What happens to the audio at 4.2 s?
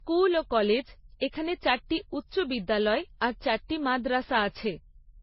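At 4.2 s, as across the whole clip, the speech is dull and smeared, with nothing above 5.6 kHz and three kinds of swirly, warbling artefacts layered together. That mix points to transcoding between lossy codecs, likely several low-bitrate stages, rather than a single codec, whose artefacts would share one character.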